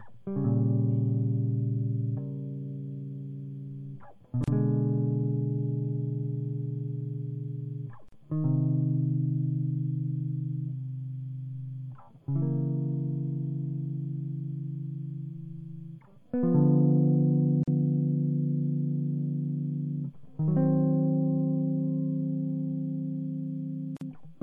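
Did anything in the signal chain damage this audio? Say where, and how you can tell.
Yes. Throughout the music there is plainly audible codec damage, likely from MP3 compression: watery, swirling treble, metallic chirps on bright transients, and smeared attacks. A spectrogram would show a hard treble ceiling with high-frequency bins flickering on and off between frames, which fits a low bitrate around 64 kbps.

A second fault shows up at the storage or editing stage: a gap at a join of encoded pieces at 4.44, 8.09, 17.63 and 23.97 s. Each gap lasts about 36, 39, 42 and 46 ms, then the music resumes where it stopped. On the waveform these are flat dropouts with slightly softened edges, left by encoder delay and end-of-file padding.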